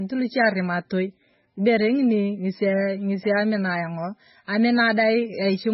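Throughout, likely MP3 compression at a very low bitrate, which fits roughly 16 kbps, has starved the encoder, so it cuts everything above 5.6 kHz and drops quieter detail frame by frame. The speech sounds dull, heavily watery and swirling, with smeared consonant onsets.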